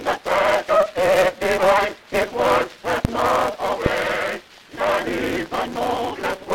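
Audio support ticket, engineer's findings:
Block size mismatch (truncated), throughout: steady 188 Hz buzz, audio running 1.88 times fast at near-normal pitch. Each written block is clipped to a shorter read, which fits a 256-sample read.

Loud pop at 3.05 s and again at 3.86 s, about 15 dB and about 20 dB above the signal. Sound continues underneath. Likely a connector, switch or driver transient.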